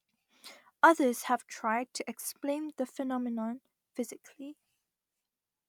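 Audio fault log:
No faults are audible anywhere in the speech, and the signal remains continuous and intact throughout.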